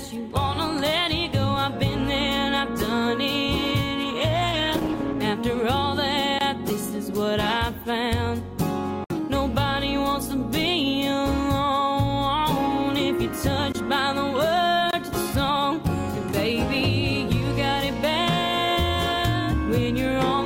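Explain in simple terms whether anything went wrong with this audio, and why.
Two things went wrong. From 4.05 to 5.31 s there is a call bitrate drop. The connection briefly got worse, so the audio was squeezed into far less data. It sounds rougher and more muffled for just over a second, then clears.

There are also four blocks of digital silence, at 6.39–6.41 s, 9.04–9.10 s, 13.72–13.75 s and 14.91–14.93 s. The software most likely didn't deliver audio in time, so tiny stretches became silence. The sound cuts out abruptly, giving a click or short hole.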